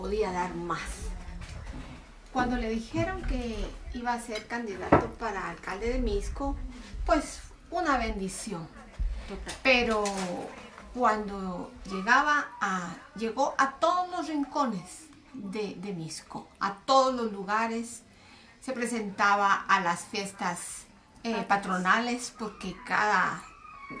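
No technical faults can be heard anywhere in the audio. Nothing in it stands out as a problem worth describing.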